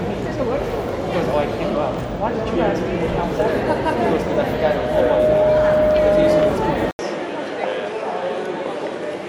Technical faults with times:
4.06-6.54 loudspeaker feedback squeal
6.91-9.29 input switched to a poorer device

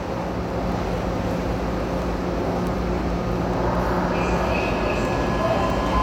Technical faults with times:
0.29-5.92 word clock ticks

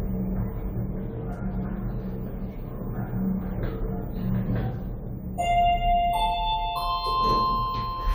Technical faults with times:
none

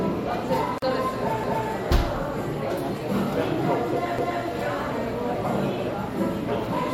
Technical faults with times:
0.78-0.82 gap at a join of encoded pieces
1.43-1.68 overlapping chunks
4.18-4.43 overlapping chunks

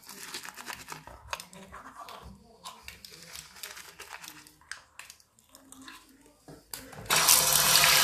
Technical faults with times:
1.33-1.37 compressed frames skipped

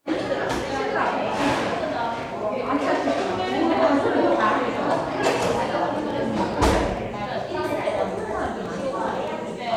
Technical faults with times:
2.05-9.75 train of clicks

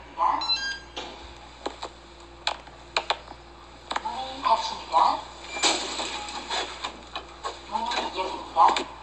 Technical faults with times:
0.00-9.02 MP2 compression

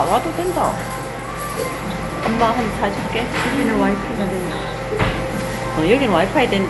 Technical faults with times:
0.00-6.70 generation loss

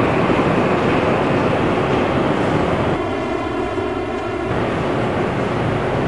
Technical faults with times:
2.96-4.51 channel delay (comb filtering)

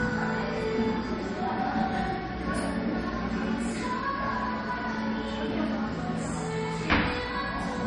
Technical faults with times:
0.00-7.86 transcoding between lossy codecs

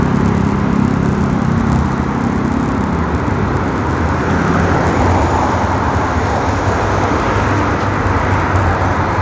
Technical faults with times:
0.00-9.21 resampler restarted on every block

